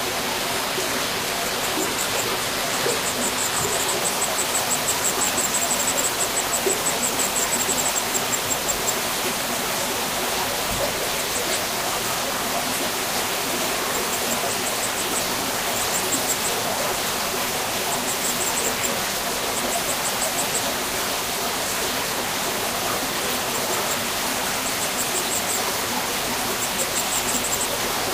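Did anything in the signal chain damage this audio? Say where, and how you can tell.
Yes, at the network and codec stage: an adaptive stream starting at a low bitrate. From 0.0 to 4.0 s the treble sounds thin and synthetic, with heavier codec artefacts, which fits a low-bitrate HE-AAC version. At 4.0 s quality jumps up with no gap, as the player moves to a better version. After that, nothing sits above 14.9 kHz.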